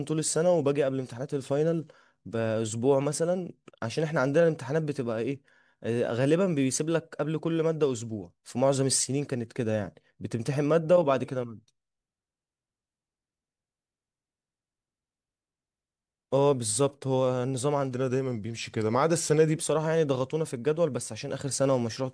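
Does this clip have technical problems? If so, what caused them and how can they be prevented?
Yes. From 17.95 to 19.58 s the speech drops about one and a half semitones and slows to 0.92 speed, a wrong sample rate fault consistent with 24 kHz audio played at 22 kHz. Prevent it by resampling to the output rate, or by opening the device at the file's true rate.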